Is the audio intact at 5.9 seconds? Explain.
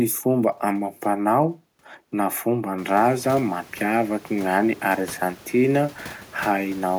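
Yes, the audio is intact at 5.9 seconds, with only the room's own background noise sitting about 24 dB below the speech.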